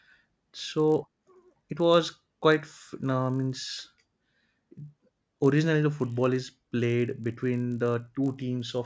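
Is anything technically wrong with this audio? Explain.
Yes. Throughout the speech there is a fault of a resampler restarted on every block. The sound points to a conversion from 24 kHz to 16 kHz done in separate 20 ms blocks. Because each block was processed without its neighbouring samples, every block edge carries a small error, which gives a steady 50 Hz buzz that rides on the speech and drops out in pauses. On a waveform, tiny discontinuities repeat every 20 ms. A spectrogram shows faint vertical lines at that spacing, with harmonics of 50 Hz.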